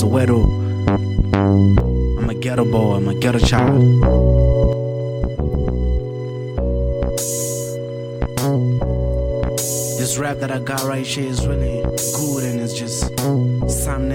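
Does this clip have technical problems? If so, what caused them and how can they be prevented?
Yes. From 1.80 to 2.56 s, and again from 4.73 s to the end, the sound drops abruptly by about 6 dB. This is one channel dropping out, likely from a lost stereo side collapsing into the mono sum. It differs from a fade or gain ride because the drop is an instant step. To prevent it, secure both channel cables and connectors and monitor each side separately.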